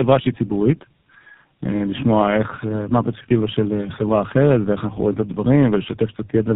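Speech, with tandem speech coding throughout: the signal is rough, muffled and warbly, with nothing above about 3.8 kHz. Each coder in the path re-encodes audio already damaged by the one before it, so quantisation noise and spectral smearing pile up. The degree of roughness points to three low-bitrate narrowband speech codecs in a row, which fits a path through AMR-NB, iLBC and finally GSM full rate, bridged by G.711 links.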